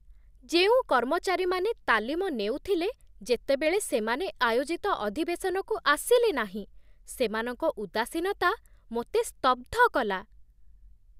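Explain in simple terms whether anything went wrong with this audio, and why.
Nothing went wrong with this recording: the speech stays steady and intact throughout, with no technical problems to point to at any moment.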